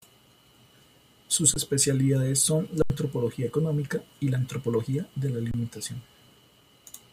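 At 1.54 to 1.56 s the speech stops for 20 ms, an underrun with held sample. The output buffer ran dry. The converter froze on its last value, so the waveform goes flat. Audio was lost. After "son la", from 2.82 to 2.90 s, an 80 ms hold cuts out about 70 ms before "económica y la antropología". After "la antropología de la", at 5.51 to 5.54 s, a 28 ms hold drops about 30 ms.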